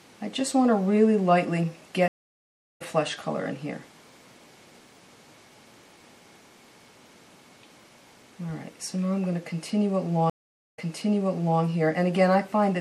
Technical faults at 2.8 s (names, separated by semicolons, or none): MP3 compression; stream reconnect